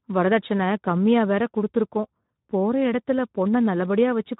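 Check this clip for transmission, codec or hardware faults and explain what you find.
There's one fault, and it runs through the whole speech clip: Speex codec damage, and it's plainly audible. Speex is a CELP coder, so it rebuilds the voice from a predicted filter plus a coarse excitation signal. At a low setting, which here sounds like it fits around 11 kbps, that excitation gets too few bits, so the speech comes out noisy and hoarse. There's also nothing above 3.8 kHz, which gives it that narrow, boxed-in phone quality.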